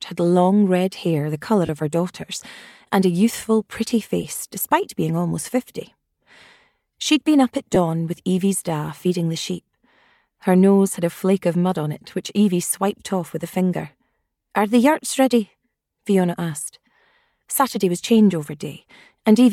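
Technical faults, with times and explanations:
1.66–1.69 s, 4.23 s and 7.75 s, lost LE Audio frames: three short dropouts, about 30 ms for the first (which fits three 10 ms frames) and 10 ms each for the others. The LC3 decoder fills each gap by repeating the last spectrum with scrambled signs, so you hear a brief noisy smear.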